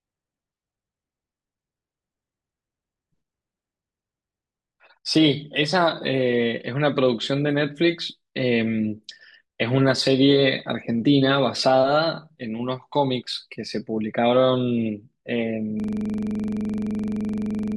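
From 15.80 s to the end, a system hang loop replays one frozen 42.67 ms buffer at 23.4 Hz: identical waveform cycles, regular spectrogram stripes.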